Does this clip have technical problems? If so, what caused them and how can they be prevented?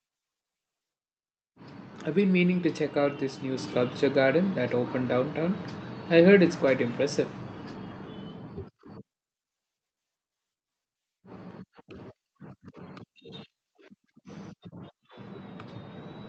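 Yes. A microphone volume step-up occurs at 3.57 s, between "check out this new" and "sculpture garden that opened." The call software raised the input volume in one step, so speech and background jump together by about 4 dB. To prevent it, disable automatic microphone gain control in the call software or operating system and set the input level manually beforehand.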